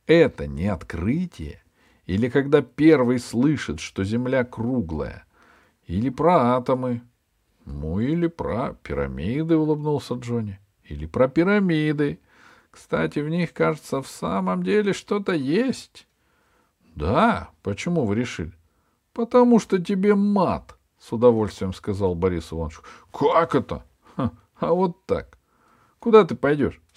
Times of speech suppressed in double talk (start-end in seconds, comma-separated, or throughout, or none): none